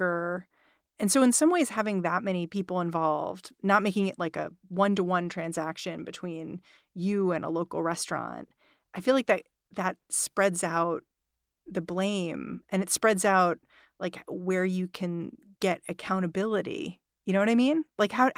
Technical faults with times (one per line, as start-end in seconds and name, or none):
none